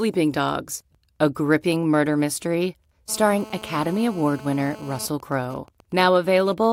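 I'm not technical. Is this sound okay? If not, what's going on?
No. From 3.09 to 5.06 s, right after "a gripping murder mystery", a harsh, raspy buzz appears: GSM phone buzz, from a nearby mobile phone on a call leaking into the recording. From 5.08 to 6.65 s it becomes even ticking with a longer buzz twice a second, which is GSM signalling bursts from that same phone while its user stays silent.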